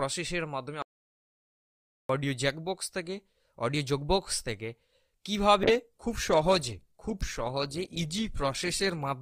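From 0.82 s to 2.09 s the sound vanishes into an audio dropout to silence, about 1.27 s of nothing at all, with no room tone or background hiss left underneath. The input was likely lost for that stretch while the recorder kept writing zeros, so whatever happened in the gap is gone. The waveform collapses to a flat line between abrupt edges, and the spectrogram shows a clean black band from top to bottom.

At 5.65 s a call bitrate drop sets in and lasts until 9.19 s. The encoder was handed far fewer bits, and the audio turns coarse, watery and muffled as detail and high frequencies are stripped away. The degradation fits a fall from around 64 kbps to about 18 kbps, held at its lowest for roughly 3.5 s. On a spectrogram the upper frequencies go dark above a hard ceiling and the remaining energy looks smeared and blocky, while the waveform's envelope changes little.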